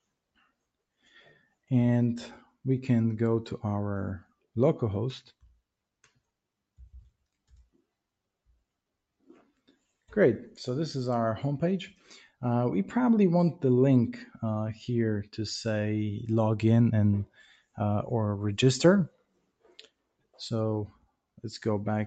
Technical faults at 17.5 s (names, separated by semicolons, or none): noise suppressor applied to music or sounds; sound cut by the noise suppressor